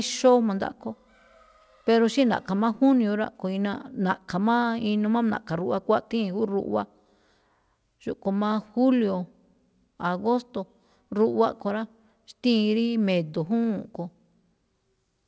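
No technical faults can be heard anywhere in the speech. It has clearly passed through a call path, with nothing above 8 kHz, which fits a wideband codec such as G.722, and the coding leaves no audible breaks or glitches.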